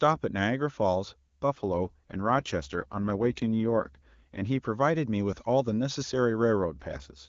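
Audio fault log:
1.55–4.47 s and 6.61–7.28 s, AMR rate drop: the radio link weakened and the network pushed the AMR-WB coder down from its full HD Voice rate, which sounds like about 23.85 kbit/s, to a much leaner mode that fits 8.85 kbit/s, spending the freed bits on error protection. With fewer bits for the excitation pulses, speech turns rough and buzzy, more machine-like, yet the bandwidth stays put and nothing drops out. Clarity returns when the rate recovers, except in the second stretch, which runs to the end.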